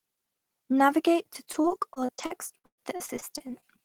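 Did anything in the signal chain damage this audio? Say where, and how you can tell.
Yes, the damage happened on the network: repeated packet loss (robotic sound) runs from 1.33 s to 3.64 s. Packets kept arriving late or not at all, and the receiver papered over each hole by stretching the last bit of speech it had. Holes follow one another throughout that span, the longest lasting 120 ms, and about a quarter of the stretch is patched-in sound. That patching is what turns the speech choppy, with pieces dropping out.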